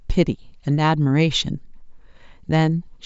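No technical faults are audible anywhere in this speech recording.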